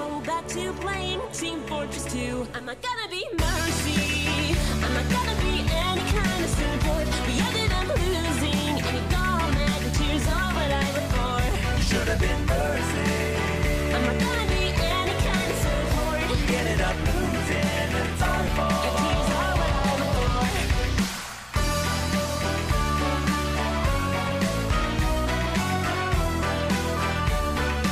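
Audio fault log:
11.54 s and 18.46 s, damaged data in a compressed stream: each is a brief blip or squawk lasting under 20 ms. Corrupted bytes in the encoded stream make the decoder misread those frames and lose sync, so it emits garbage until it finds the next valid frame header.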